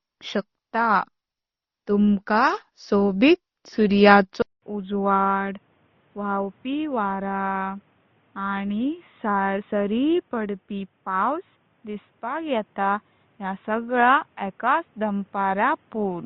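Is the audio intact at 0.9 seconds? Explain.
No. At 0.9 seconds, as across the whole speech clip, the audio shows transcoding between lossy codecs. It was likely encoded at a low rate, as MP3 and then Opus, each near 32 kbit/s. The second encoder spends bits on the first one's smearing and adds its own swirly, watery texture. Both kinds of artefact are heard together. On a spectrogram, energy stops flat at about 6.8 kHz, with patchy, blocky holes below that line.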